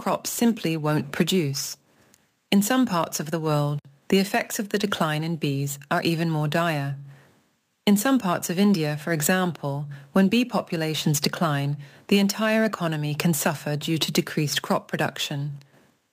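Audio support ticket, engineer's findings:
Bright metallic fizz throughout, following signal level, about 19 dB down. Imaging from sample-and-hold upsampling, 22 to 48 kHz, no smoothing filter; mirror images at 11.0–22.1 kHz.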